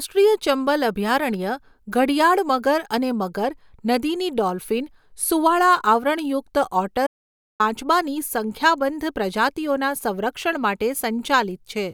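At 7.07 s the speech cuts out abruptly and the track drops to dead digital silence until 7.60 s, roughly half a second with no room tone at all, then picks straight back up mid-flow. That's an audio dropout to silence. The likely cause is the input being lost for a moment, a connection hiccup or a brief mute, while the recorder kept writing zeros. Whatever was said in that gap is simply gone.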